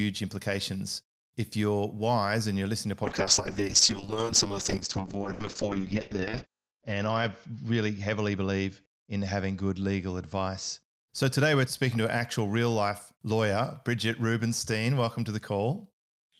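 From 3.04 s to 10.89 s this speech turns rough, watery and muffled, with the top end cut from about 20 kHz to 8 kHz, worst for roughly 3 s. This is a call bitrate drop: the encoder was starved of bits, which fits a fall from about 40 to 6 kbps.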